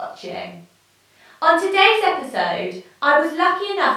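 No dropouts, glitches, level jumps or distortion events occur anywhere in this recording.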